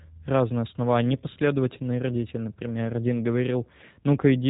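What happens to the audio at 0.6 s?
At 0.6 s the speech carries G.729 codec damage, present across the whole clip. The codec rebuilds each frame from a filter, pitch predictor and a few pulses, fitting 8 kbit/s. Nothing above 3.8 kHz survives. It sounds plainly rough and synthetic.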